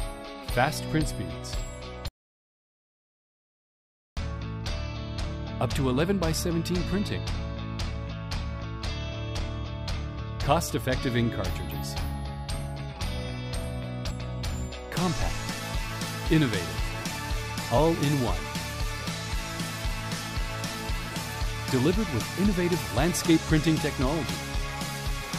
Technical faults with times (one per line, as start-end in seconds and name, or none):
2.08-4.17 audio dropout to silence
14.10 damaged data in a compressed stream
17.77 damaged data in a compressed stream